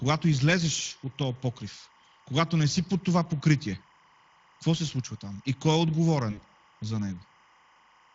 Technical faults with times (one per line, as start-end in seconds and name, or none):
0.00-8.14 timecode bleed
0.00-8.14 Speex codec
6.31-6.41 VoIP packet loss concealed by the speech codec